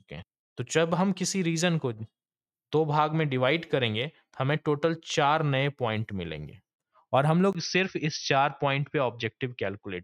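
At 7.53 s a brief gap of about 20 ms is followed by sound that runs to the end with a narrower band: duller, boxier, with a faint new noise floor at about the same level. This is likely an input switched to a poorer device.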